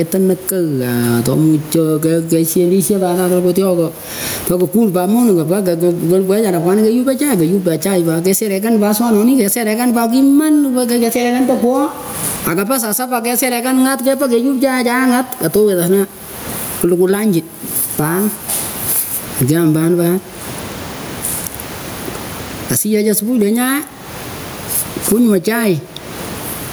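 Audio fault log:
Throughout, gain pumping: the level keeps getting pulled down each time the speech gets loud, swinging somewhere around 25 dB, with the room noise sitting about 35 dB under the speech. The likely cause is input gain set way too high, with a fast limiter or compressor clamping down on each loud bit, so it all sounds squashed and the loud and quiet parts end up oddly close in level.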